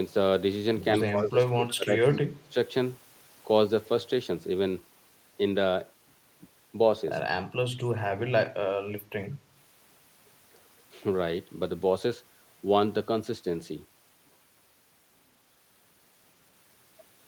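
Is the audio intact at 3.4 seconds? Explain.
Yes, the speech at 3.4 seconds plays through intact, with no dropout, click, distortion or other fault at that moment.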